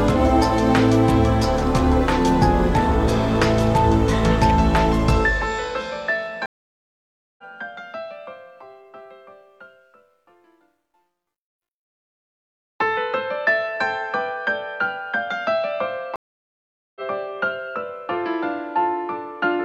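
The audio suffers two stream reconnects: the network connection dropped, the player lost its feed, then reconnected and started a fresh decoder partway into the stream. At 6.46 s the sound cuts to about 0.92 s of silence and comes back at 7.44 s roughly a second further on, so that stretch is simply missing. At 16.16 s a second dropout lasts about 0.8 s, and playback resumes at 17.01 s around half a second ahead of where it stopped.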